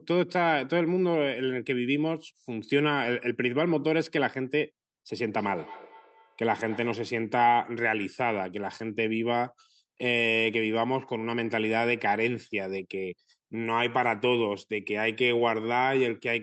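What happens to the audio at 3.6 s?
At 3.6 s the speech is intact, carried through the Opus call path with its usual band limit near 8 kHz.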